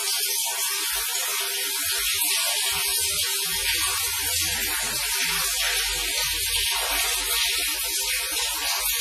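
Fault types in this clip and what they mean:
WMA compression, throughout: heavy ringing and washy smearing, with a hiss that breathes with the sound and nothing above 15.1 kHz. This likely comes from a transform codec at a bitrate near 24 kbps, its long blocks spreading quantisation noise and zeroing weak detail.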